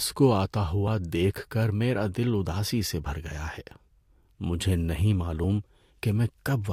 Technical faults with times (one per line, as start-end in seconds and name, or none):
0.87 dropped buffer (overrun)
5.44 dropped buffer (overrun)